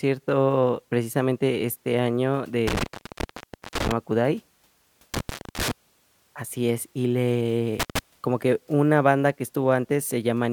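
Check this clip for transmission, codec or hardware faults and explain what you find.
The speech has one hardware fault, repeated three times: intermittent contact. The sound drops out with crackle at each edge, leaving faint hiss, as a loose cable or plug briefly opens the line. This happens at 2.67–3.92 s, right after "precisamente este año" (open about 0.91 s), at 5.14–5.71 s (about 0.30 s), and at 7.80–7.99 s, just before "como que una banda" (about 0.13 s).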